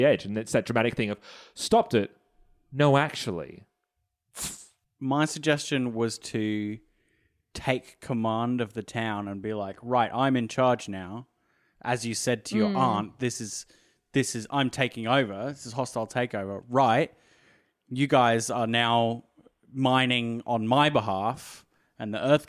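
Listening to the speech recording, nothing technical stood out as wrong at any point.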